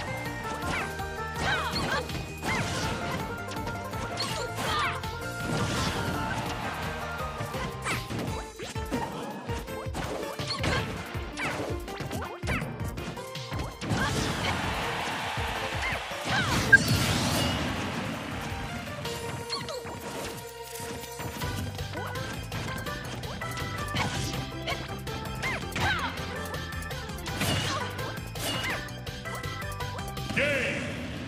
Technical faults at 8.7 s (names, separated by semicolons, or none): compressed frames skipped